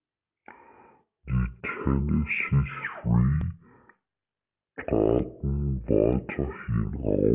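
The audio was played back at a wrong sample rate, half the rate it was captured at and with no conversion, which fits 16 kHz material being clocked out at 8 kHz. Across the whole speech clip, everything therefore runs at 0.5 times normal speed and sits a full octave, 12 semitones, lower in pitch. The speech sounds drawn out and heavy, with each syllable taking twice as long as it should.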